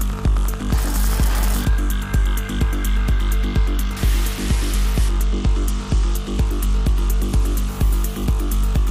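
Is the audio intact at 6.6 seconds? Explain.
No. A Bluetooth SBC bit pool drop runs from 4.32 to 7.69 s: a congested link forced coarser encoding, which fits the bit pool falling from 28 to 12 (about 96 kbps). The upper sub-bands starve, so the treble dulls and gritty noise rises.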